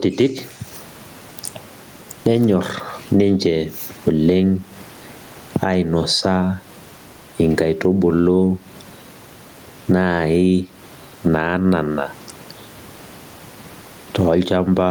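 Gain pumping runs through the whole speech clip: the room noise, which sits about 40 dB below the speech, is pushed around by a gain swing of roughly 15 dB as the talker gets loud, so loud and quiet passages end up closer in level and sound squashed. The likely cause is input gain set far too high, with a fast limiter pulling it back on each peak. Unlike a noise gate, the background never drops to silence; it is not chopped off between phrases.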